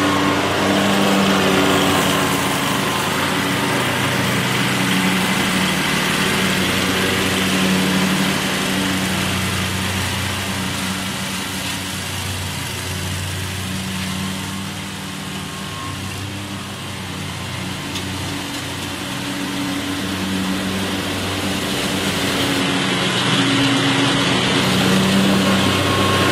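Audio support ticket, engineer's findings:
Adaptive stream at a lower bitrate, 22.61–24.61 s. Sudden drop in quality with no gap: nothing above 11.8 kHz, codec artefacts rising. Then recovery at 24.61 s.

Probable component: streaming client's bitrate adaptation. Player switched to a low-rate rendition, which fits a move from roughly 96 kbit/s AAC to 16 kbit/s HE-AAC, with band replication standing in for the real treble.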